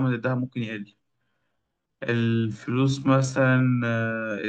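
From 0.90 s to the end, the speech abruptly slows to about 0.63 times its pace while its pitch stays put, so it drags. This is a time-stretched section, likely from software lengthening the audio by repeating short slices.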